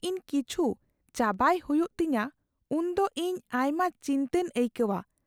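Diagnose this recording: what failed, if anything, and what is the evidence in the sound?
Nothing failed: no fault is audible in the speech.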